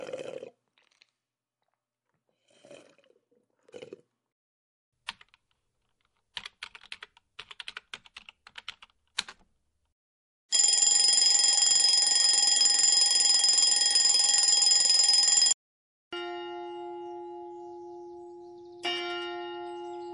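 MP3 compression runs through the whole clip, most likely the cause of its watery, swirling texture. Weak frequency components flicker in and out from frame to frame as the encoder starves them of bits. Sharp attacks come out smeared, and sibilant, noisy content picks up metallic chirps. The damage is plainly audible, which fits a low bitrate of around 48 kbps.

Pre-echo appears before five sharp attacks, at 5.06, 6.34, 8.14, 9.15 and 10.48 s. Each time, a brief hiss of 24 to 35 ms leads into the transient and softens its edge. The noise rises by about 20 dB in most cases, about 14 dB at 8.14 s and about 38 dB at 10.48 s. The codec spreads quantisation noise across a block of roughly 48 ms, sized for the loud attack, so the noise spills into the quiet moment just before it. These smears point to an encoder that never switched to short blocks.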